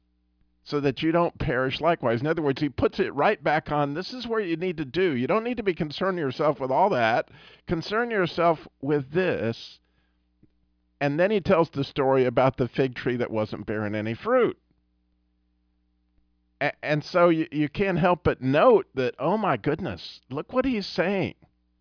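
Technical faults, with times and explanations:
No technical faults can be heard in the speech. There is nothing to mark with a time or explain.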